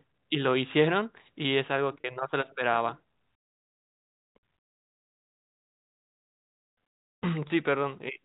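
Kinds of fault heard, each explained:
Packet loss with pitch repetition: Parts of the speech stream went missing, and the receiver filled each gap by repeating the last pitch cycle. Here the gaps are short, 30 ms at 2.01 to 2.04 s and 20 ms at 7.48 to 7.50 s. Each sounds like a brief, slightly buzzy held tone.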